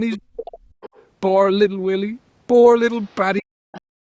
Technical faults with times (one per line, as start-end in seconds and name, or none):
0.11-0.18 other side's voice leaking through
0.16-0.76 speech suppressed in double talk
0.81-1.03 other side's voice leaking through
3.03-3.42 other side's voice leaking through
3.41-4.00 speech suppressed in double talk
3.73-3.79 other side's voice leaking through